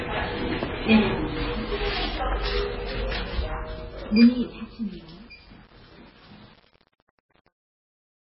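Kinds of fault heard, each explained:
MP3 compression: A bit-starved encoder, likely MP3 at a rate that points to about 15 kbps, cuts the treble and switches weak frequency lines on and off between frames. Nothing remains above 5.5 kHz, so the sound is dull and watery, with smeared attacks.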